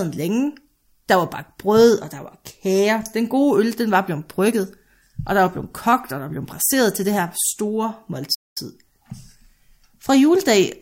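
At 8.34 s, right after "til det her store", there's a playback stall: the speech just cuts to silence for about 0.21 s, then picks back up. Likely the player ran dry of data or its thread got blocked, so output simply froze until it recovered.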